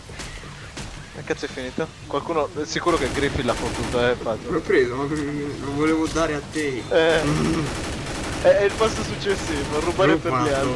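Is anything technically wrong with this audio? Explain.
No technical faults are audible.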